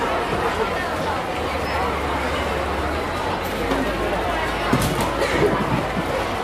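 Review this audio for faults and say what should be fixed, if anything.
Nothing here needs fixing; no faults turn up anywhere in the audio, so it can stay as it is.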